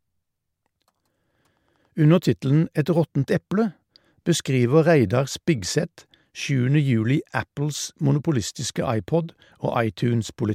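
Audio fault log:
No faults detected in the speech; nothing to log.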